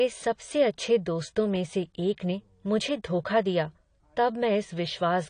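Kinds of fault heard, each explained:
AAC compression: The speech sounds dull and smeared for the whole clip, and the coding damage is plainly audible. Nothing is heard above 10 kHz, so the top of the spectrum is missing. Sibilants and held sounds take on a warbling, fizzy texture. The likely cause is AAC-LC coding, which quantises each frame's frequency lines against a hearing model and discards the upper band to save bits. The damage fits a low bitrate of around 32 kbps.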